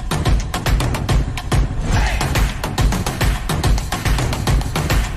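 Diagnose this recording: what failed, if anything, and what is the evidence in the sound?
Compressed frames skipped at 0.63, 1.93 and 4.04 s, a codec or decoding fault. Each time the audio jumps forward by about one 23.2 ms frame.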